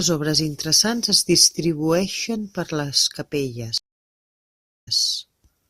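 At 3.78 s the speech cuts to silence for about 1.05 s, and by 4.96 s it has resumed with a stream reconnect. The connection dropped, the player went quiet, then reconnected and started a fresh decoder partway through the stream. The restart comes in softly and picks up about 0.13 s earlier than where it broke off, so a short stretch of speech is heard twice. A plain dropout would instead resume at or after the break point.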